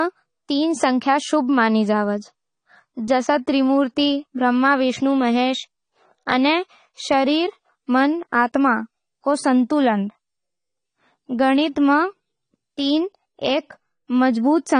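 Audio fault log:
Throughout, AAC compression: the speech sounds dull and muffled, with nothing above 10 kHz, and the sibilants and sustained vowels carry a fizzy, warbling texture that is plainly audible. This is likely low-bitrate AAC-LC coding, which fits a rate around 32 kbps: the encoder lowers its cut-off to save bits and quantises each frame's spectrum so coarsely against its hearing model that bands drop out or are filled with substitute noise.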